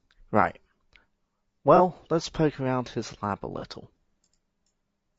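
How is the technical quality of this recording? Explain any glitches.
The technical quality is limited: the speech carries audible codec damage for its whole length, plus two brief concealed dropouts.

Throughout, the voice sounds rough and grainy, with noise filling the gaps between harmonics and a thin, somewhat synthetic top band. The likely cause is low-delay AAC compression of the AAC-ELD kind used in video calls, at a bitrate in the region of 32 kbps. At that rate it has too few bits for its roughly 500 frequency lines a frame, so noise fills in between the harmonics.

At 1.76 to 1.81 s, just before "let's poke around his", and again at 3.59 to 3.64 s, there is AAC frame loss with concealment. About 30 ms of audio is missing each time, which fits the loss of a single frame. The decoder patches the gap from the last good spectrum rather than leaving silence, so each spot is heard as a short smeared, noisy or phasey patch instead of a clean dropout.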